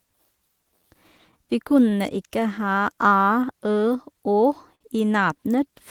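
Clock drift between sender and receiver runs through the whole of this speech recording: the sending clock is slow by roughly four percent, so the receiver's jitter buffer keeps draining and has to be topped up with extra material to keep playback going. Repeated timing corrections follow from 0.10 s to 5.72 s, all in the same direction. The receiver repeats short pieces at uneven intervals, slowing delivery to 97% speed and adding roughly a fifth of a second in total. A short stall from a late packet then occurs at 4.75 to 4.82 s. With the buffer briefly empty, the last sound is held for 54 ms until the packet arrives, nothing is lost, and playback resumes from the same point.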